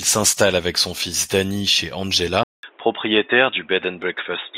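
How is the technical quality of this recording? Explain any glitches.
The recording degrades partway through. At 2.43 s the input switched to a poorer device, most likely another microphone or a headset's call profile, and the poorer device carries the speech to the end. A gap of about 200 ms of silence marks the switch. After it, nothing comes through above 3.8 kHz, so the speech turns dull and boxy. A faint new background noise sits well below the speech, while the loudness stays about the same.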